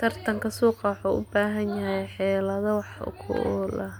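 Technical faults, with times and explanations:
No technical faults detected in this speech recording.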